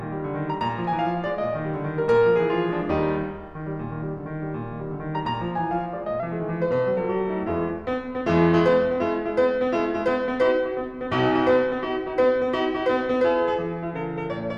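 From 6.20 s to the end, the music plays about 1.09 times fast and roughly a semitone and a half sharp. This is a wrong sample rate, which fits 44.1 kHz material played at 48 kHz. Speed and pitch rise together, unlike pitch-shifting.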